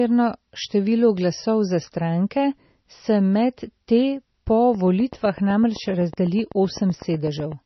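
MP3 compression runs throughout: nothing sounds above 5.9 kHz and the speech turns watery and swirly, which fits a heavily starved encoder at likely around 24 kbps. A train of clicks from 4.75 to 7.53 s brings about twenty regular pops at 7.9 per second, peaking roughly 5 dB over the speech, likely from electrical interference.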